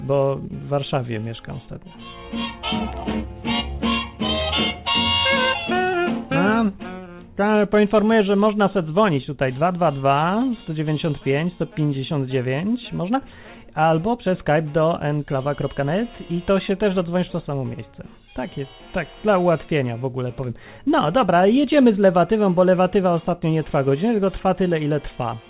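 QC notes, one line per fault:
No faults were found in this clip. It has come through a call path whose band stops at about 4 kHz, which fits G.711 mu-law telephone coding.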